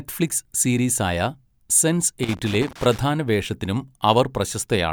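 From 2.23 s to 3.01 s the speech is broken by loose connector crackle: a worn or dirty contact intermittently opens and closes, chopping the signal and adding pops from any DC offset. It is heard as an irregular, scratchy burst lasting roughly 0.8 s.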